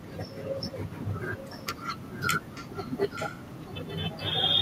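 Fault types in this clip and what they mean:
Echo leak: speech returns 0.88 s late as a faint-to-loud copy, likely from an incomplete echo canceller; spectrograms show harmonic patterns repeated, shifted later.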